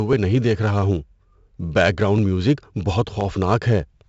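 From start to end, the speech carries a gritty hiss that swells with every louder syllable and drops back in pauses, and sharp onsets sound roughened. The top end is dull, with nothing above about 7.8 kHz. This is heavy 4-bit ADPCM compression. Each sample is coded as a small step from a prediction, and the step size adapts to the signal, so the error rides on the level, while on sharp attacks the step cannot grow fast enough and smears them. The cut-off fits a 64 kbps stream at a reduced sample rate.

Between 0.13 s and 3.21 s, a short click recurs at a steady 1.02 s interval, around four times in all. These are clock drift buffer slips, likely caused by two devices running on clocks that disagree by roughly 700 ppm. The buffer between them slowly drifts until a small block of samples, on the order of 30, is dropped or repeated, and each jump in the waveform lands as a tick.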